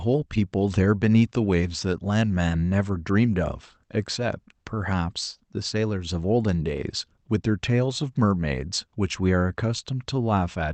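Nothing goes wrong in this one: the speech just comes through what sounds like an ordinary call codec with its top end rolled off around 8 kHz, which is simply the path doing its usual job.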